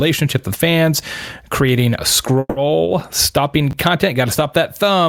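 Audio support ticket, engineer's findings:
Call audio freeze, 2.39–2.58 s, just after "with fans creating a": likely jitter buffer underrun from delayed packets. Last sound extended about 170 ms, fading, brief silence, then resumes where it stopped.

Short concealed packet loss, 2.84–2.88 s: 20 ms never reached decoder. Receiver extrapolated the preceding sound, giving a brief smear before blending back.

Chunks out of order, 3.00 s and 3.71 s: 10 ms chunk played one position late each time. Order scrambled with hard joins, heard as a jumbled moment, nothing lost.

Call bitrate drop, 3.28–4.64 s: bandwidth estimate fell, encoder pushed from 64 to 28 kbps, lowest for about 1.3 s. Coarser coding makes the speech rough until recovery.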